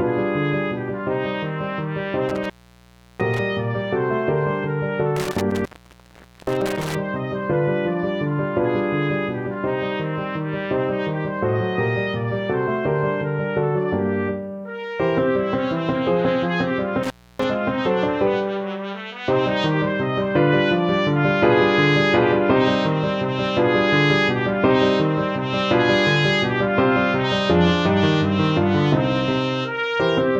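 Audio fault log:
2.29–3.39 s, 5.16–6.95 s, 17.03–17.44 s: intermittent contact. The sound drops out with crackle at each edge and faint hiss in the gaps, which last about 0.70, 0.82 and 0.29 s, as a loose connection opens briefly.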